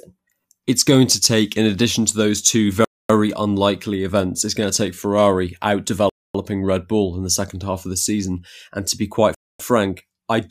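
At 2.85 to 3.10 s, 6.10 to 6.35 s and 9.35 to 9.60 s, a gap between chunks opens 250 ms of silence, every 3.0 s, as stream chunks fail to join. The first falls after "addition to those two" and the last after "to be quite."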